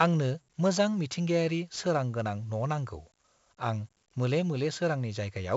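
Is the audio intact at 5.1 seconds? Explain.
No. At 5.1 seconds the speech carries 4-bit ADPCM compression throughout, with a gritty hiss that tracks loudness and nothing above about 7.7 kHz. It differs from plain low-bitrate quantisation because the noise rises and falls with each loud sound.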